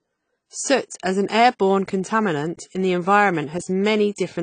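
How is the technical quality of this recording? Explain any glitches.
The recording is clearly degraded by lossy compression that runs through the whole clip.

AAC compression, throughout: nothing is left above about 9.3 kHz, and the speech sounds dull and smeared, with a fizzy, warbling edge on sibilants. This likely comes from an AAC-LC encoder quantising its frequency lines too coarsely, leaving spectral holes, which fits a low bitrate around 24 kbps.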